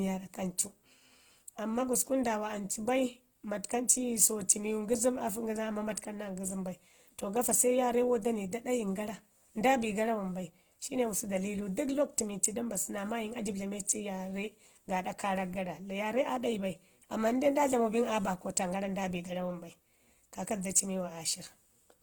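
From start to finish the speech has a rough, grainy texture, with upper harmonics turned noisy rather than clean, while the top end still reaches about 20.1 kHz, so the sound is not muffled. This is Opus compression, likely in its music-oriented CELT mode at a starved bitrate near 16 kbps: the encoder preserves each band's energy but, lacking bits for detail, fills bands with noise or folded copies of lower ones.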